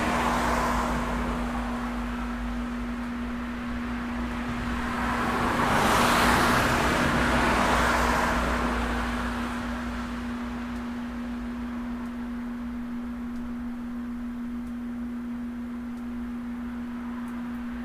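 Nothing stood out as a technical problem on listening to this recording of sounds.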